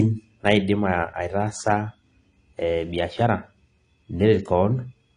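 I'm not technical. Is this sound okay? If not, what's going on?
No. AAC compression damage runs through the whole recording, from start to finish, and is plainly audible. The likely cause is that the speech was squeezed into a small file with the AAC format. To save space, it throws away detail it judges least noticeable. Here nothing survives above about 10.2 kHz, so the speech sounds dull and muffled, and the remaining detail is coarsely approximated, giving a smeared, swirly texture, especially on hissy sounds like s.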